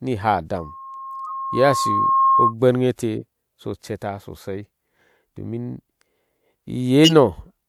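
From 0.57 to 2.54 s, a loudspeaker feedback squeal: the microphone picks up its own loudspeaker, and the loop runs away at 1.1 kHz. A pure tone swells over roughly a second and a half to a few decibels above the speech.

At 1.23 to 1.32 s, a corrupt frame was decoded. Damaged bits across a couple of compressed frames were played anyway, producing a brief chirp or burst of misplaced energy.

Between 3.14 and 3.23 s, compressed frames were skipped. About 50 ms of audio never plays, so the speech jumps forward at the join.

At 7.04 to 7.12 s, another corrupt frame was decoded. A single damaged frame bursts out as a chirp or burst of noise, stronger than the earlier one.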